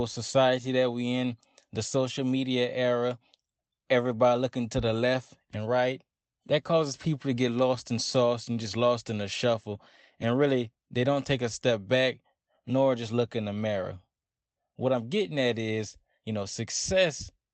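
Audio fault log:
Nothing in this speech recording stood out as a fault on listening.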